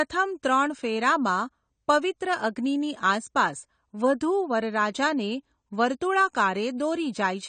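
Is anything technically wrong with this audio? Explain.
Yes. Throughout the speech there is plainly audible damage, likely from AAC compression. Nothing is present above 9 kHz, so sibilants sound dull and smeared, with a fizzy, warbling edge on sustained sounds. The encoder quantises each frame's frequency lines coarsely and drops or noise-fills bands it judges less audible, which fits a low bitrate around 32 kbps. A spectrogram would show a hard ceiling at 9 kHz, with patchy holes and blocky, flickering energy below it.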